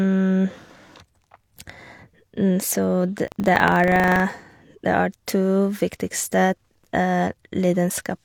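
From 3.24 to 4.23 s the speech takes on a robotic rattle at 25 Hz, the mark of buffer tearing. The writer and the playback read point have slipped and cross within each period, so a small sliver of every 40 ms buffer holds audio from about 70 ms earlier, hard-spliced on both sides.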